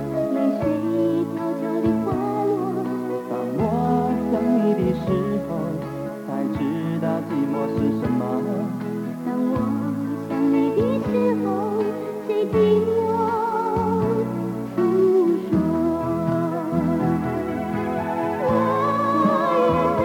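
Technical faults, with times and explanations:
No technical faults can be heard anywhere in the audio.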